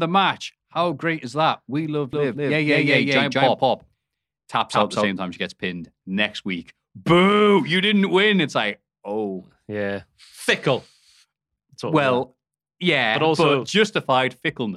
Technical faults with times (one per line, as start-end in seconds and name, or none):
2.13-5.07 doubled audio track